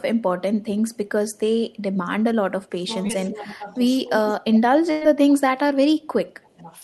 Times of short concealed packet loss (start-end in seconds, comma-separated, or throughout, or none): 3.07-3.11